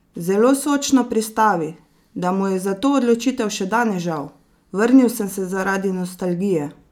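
Nothing in this one stands out as a technical fault; the speech runs along without any glitch, dropout or distortion catching the ear.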